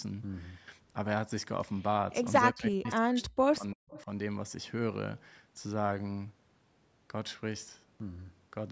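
From 2.51 to 4.08 s, speech is suppressed in double talk: the echo canceller likely mistook simultaneous talk from both ends for echo and clamped down. The speech dips by as much as about 40 dB, affecting roughly a second in all.

Within that stretch, at 2.87 to 2.91 s and again at 3.90 to 4.04 s, echo leak appears: far-end loudspeaker sound likely slipped past cancellation and returned 338 ms late. Brief scraps of repeated audio surface, about 20 dB and 25 dB below the main speech.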